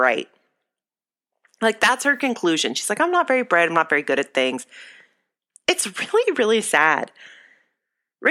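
No dropouts, clicks, distortion or other transport or processing faults turn up anywhere in this speech recording.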